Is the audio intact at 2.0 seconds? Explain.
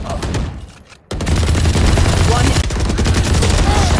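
Yes, the audio is intact at 2.0 seconds, with no dropout, glitch or other fault at that point.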